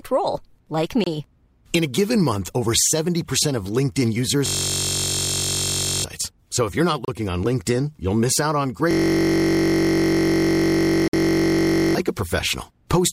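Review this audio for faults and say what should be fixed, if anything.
Gaps between stream segments occur at 1.04 s (just after "role like", 26 ms), 7.05 s (after "if you're not", 30 ms) and 11.08 s (54 ms, inside the second loop). Segment timestamps leave holes, which the player fills with hard-edged silence. No audio is lost. Each gap shows as a flat line in the waveform and a blank vertical column in the spectrogram. Fix it by stitching segments on continuous timestamps so that adjacent boundaries meet exactly.

The system hang loops run from 4.46 to 6.04 s and from 8.91 to 11.95 s, after "you'll miss out on". A frozen system left the hardware cycling one 21.33 ms buffer, which fits a 1024-sample buffer. This produces a steady 46.9 Hz buzz and drops roughly 1.5 s and 3 s of audio. The waveform shows identical repeating blocks, and the spectrogram shows horizontal harmonic stripes at multiples of 46.9 Hz. 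Fix it by finding the driver or system stall and adding a watchdog that mutes output when the buffer stops being refilled.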